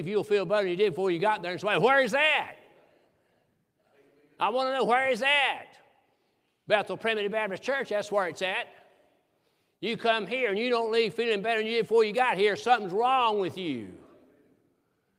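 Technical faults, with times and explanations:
No technical faults detected anywhere in the speech.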